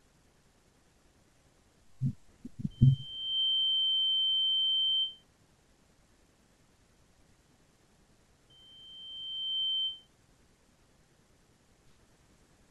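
A speech clip with loudspeaker feedback squeal twice, 2.70–5.24 s and 8.50–10.08 s: a 3.1 kHz tone swelling over about 0.7 s and 1 s respectively to roughly 10 dB above the speech, from the mic re-amplifying its own loudspeaker.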